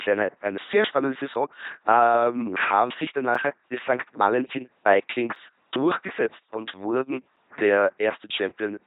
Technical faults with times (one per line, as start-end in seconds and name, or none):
0.00-8.87 LPC-10 vocoder
1.34 gap between chunks
3.35 gap between chunks
5.35 gap between chunks
7.36 gap between chunks